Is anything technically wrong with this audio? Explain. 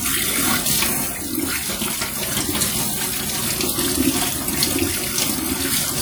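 Yes. Audible compression damage runs through the whole clip. It rings and sounds washy, with a hiss that rises and falls with the sound. This is likely WMA compression. Its long transform blocks smear quantisation noise over tens of milliseconds, which fits a bitrate around 48 kbps.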